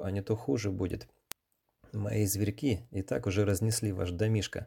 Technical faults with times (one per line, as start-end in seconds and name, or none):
0.22-4.60 word clock ticks